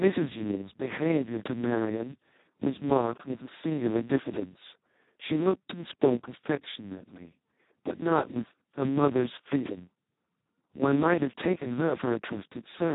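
Speex codec, throughout: too few bits for the excitation leave the speech hoarse and robotic, fitting a rate near 2 kbps, with nothing above 3.8 kHz.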